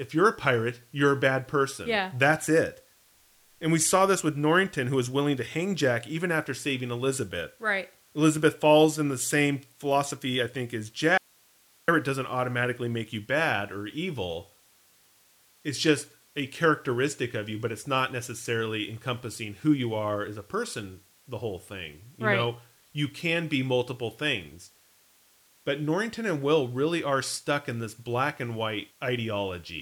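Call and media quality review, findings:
Audio dropout to a faint residue, 11.18–11.88 s (about 0.7 s), after "philosophy I think as", resuming at "doesn't automatically make you". Speech cuts abruptly to hiss about 35 dB down. Likely upstream source or link loss while the downstream path stayed live, passing only its own noise floor. Not a pause or fade.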